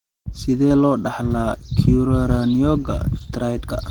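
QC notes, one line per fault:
throughout, Opus compression: the speech sounds hoarse, grainy and muffled, likely Opus in hybrid speech mode starved of bits, which fits roughly 16 kbps.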